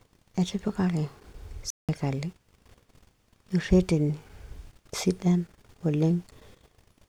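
A speech recording with a playback stall from 1.70 to 1.89 s, where output drops to silence for 185 ms, likely because the player's buffer ran dry.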